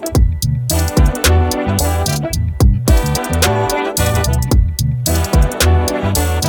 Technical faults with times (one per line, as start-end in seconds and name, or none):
none